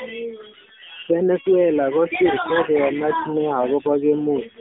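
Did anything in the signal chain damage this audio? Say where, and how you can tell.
Yes, at the codec, throughout: AMR narrowband mobile codec. Nothing passes above 3.7 kHz, and a buzzy, synthetic texture, which plain band-limiting wouldn't add, fits a low 7.4 kbps mode.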